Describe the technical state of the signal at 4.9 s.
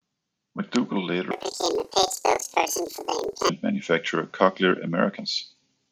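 At 4.9 s the speech signal is intact, with no audible fault at that moment.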